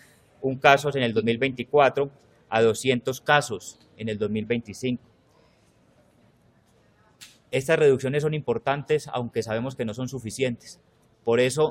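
No technical faults can be heard anywhere in this audio. There is nothing to point to by time and no cause to explain.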